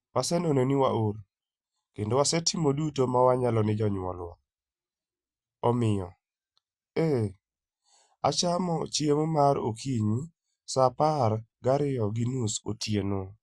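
Nothing goes wrong anywhere in this speech recording; there's no technical fault to point to at any moment.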